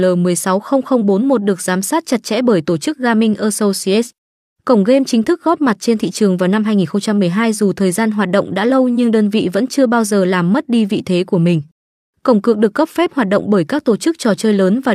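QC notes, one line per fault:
No faults found in this clip.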